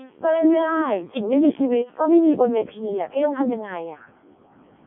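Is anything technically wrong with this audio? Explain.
Yes, throughout the speech there's Codec 2 vocoder damage. Only pitch, voicing, energy and spectral envelope survive, rebuilt from sine waves, so it's heavily robotic and buzzy, nothing above 3.7 kHz, consistent with roughly 0.7 kbit/s.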